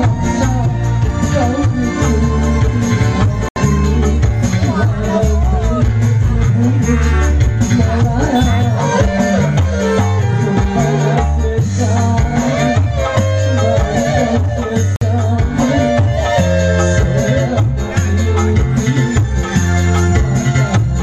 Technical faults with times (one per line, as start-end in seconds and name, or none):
3.48-3.57 Bluetooth stall
14.96-15.02 Bluetooth stall